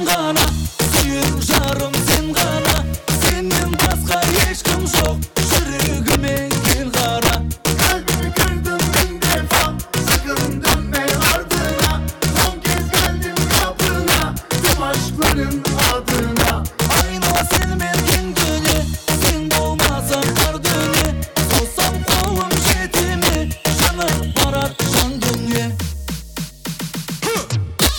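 Integer overflow runs through the whole clip. The signal was driven about 2 dB past the top of the integer range, and instead of being limited there, each sample that exceeds it wraps around to the opposite extreme. Only a small share of samples, around two percent, cross the limit, so the damage lands on the loudest peaks. Each one becomes a jump across the full range heard as a harsh, violent crack, far sharper than ordinary clipping.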